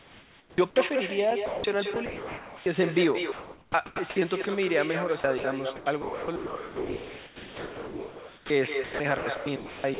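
With no echo canceller at the far end, a loudspeaker there feeds the call back into its microphone, and nothing strips it out. Across the whole clip, every phrase of speech returns about a fifth of a second later as a copy about 7 dB below the original. That copy is thinner, and it trails each phrase like a shadow. The G.711 path cuts everything above 4 kHz.

From 0.00 to 0.76 s the sound is chopped by the voice detector. The sender likely gated the signal on and off several times, and about 640 ms of it became synthetic comfort noise. The start stutters.

From 1.46 to 1.64 s the sound is dropped by the voice detector: 180 ms of sound is simply gone. The sender likely judged it to be background and stopped transmitting, so steady comfort noise fills the gap until the audio resumes.

The same chopping returns at 1.94 to 2.66 s, 3.32 to 4.16 s, 5.20 to 5.44 s, 5.76 to 8.50 s, and 8.84 to 10.00 s. 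The longest stretch swaps about 2.5 s for comfort noise, leaving the sound choppy.

A second, very short dropout occurs at 4.42 to 4.44 s. It removes 20 ms, which is heard as a tiny hole filled with noise.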